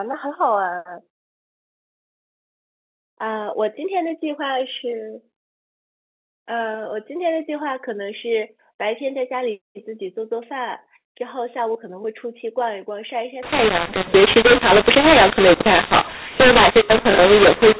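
From 13.43 s to the end, it's a mu-law and A-law mix-up: mu-law telephone audio decoded as A-law, so levels scramble, speech turns harsh, and pauses fill with hiss.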